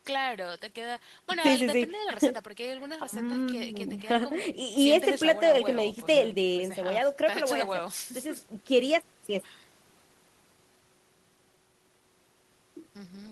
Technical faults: none

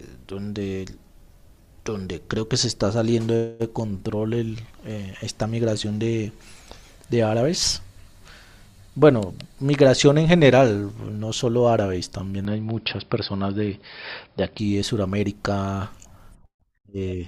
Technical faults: input switched to a poorer device

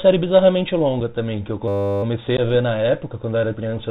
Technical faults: Bluetooth CVSD headset codec; unconcealed Bluetooth headset packet loss; system hang loop

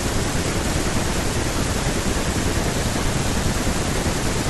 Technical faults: none

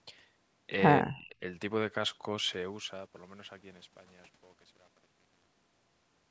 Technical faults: speech suppressed in double talk

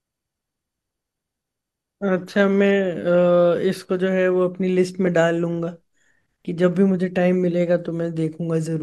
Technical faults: none

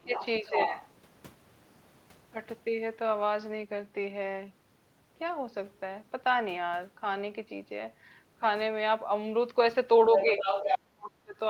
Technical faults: other side's voice leaking through; speech suppressed in double talk

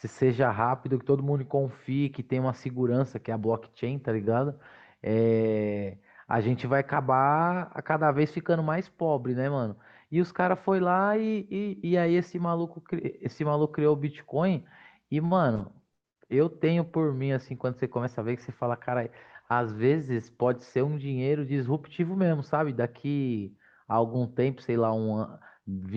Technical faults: short stall from a late packet; call bitrate drop; burst of packet loss; jitter buffer speed-up

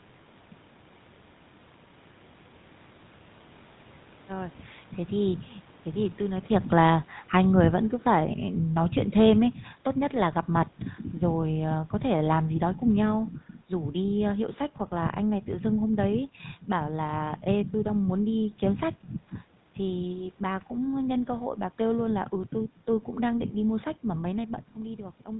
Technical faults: GSM full-rate codec; automatic gain falling

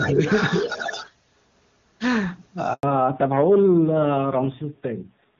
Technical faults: echo leak; speech suppressed in double talk; handover gap; fallback to narrowband

